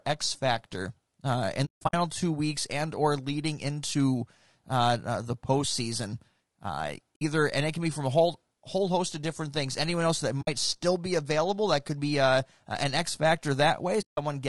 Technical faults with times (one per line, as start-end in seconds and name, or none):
0.00-14.48 low-delay AAC compression
1.65-1.94 AAC frame loss with muting
7.15-7.22 AAC frame loss with muting
10.41-10.48 AAC frame loss with muting
14.01-14.18 AAC frame loss with muting